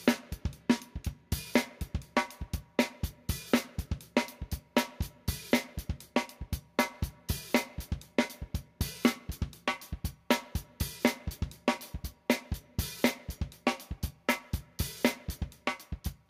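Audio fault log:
No faults found in this sound recording.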